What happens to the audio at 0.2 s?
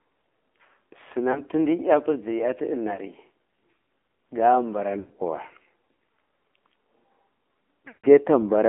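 AMR narrowband mobile codec damage is already present at 0.2 s and runs through the whole clip. The speech is squeezed into a line band of about 250 Hz to 3.5 kHz, and the low bit budget, consistent with AMR-NB's 7.4 kbps mode, leaves it plainly buzzy and synthetic.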